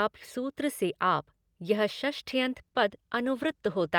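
At 2.42 s the speech suddenly loses quality. This is a call bitrate drop. The connection's bandwidth estimate fell, so the encoder had to spend far fewer bits on each moment of sound. The coding becomes coarse. The speech turns rough and watery, and the top end dulls as high frequencies are cut away. The change suggests a fall from about 64 kbps to about 22 kbps. The worst stretch lasts about 1.28 s. Quality has not fully recovered before the clip ends at 3.98 s.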